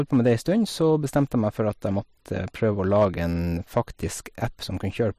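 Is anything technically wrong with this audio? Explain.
Yes, the speech has hard clipping at 0.13–0.52 s, 1.16–1.22 s, 2.95–3.05 s and 3.77–3.80 s, overdriven by about 3 dB (about 2 dB at 1.16 s). The peaks exceed what a stage can pass and are cut flat, adding distortion. The waveform shows squared-off tops, and the spectrogram shows energy smeared upward at those moments.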